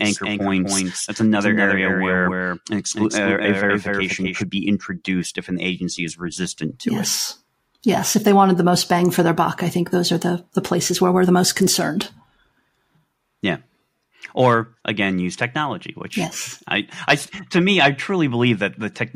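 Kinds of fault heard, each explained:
Doubled audio track: from the start to 4.42 s, just before "be introduced if an", the speech plays twice, with a dry full-band copy about 5 dB quieter trailing roughly 0.3 s behind. It is likely from a slower second capture path, and it stops abruptly.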